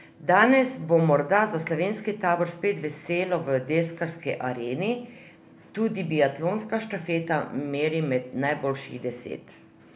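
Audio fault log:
No audible faults detected.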